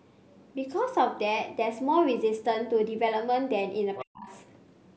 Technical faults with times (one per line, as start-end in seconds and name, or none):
3.96-4.05 other side's voice leaking through
4.02-4.29 speech suppressed in double talk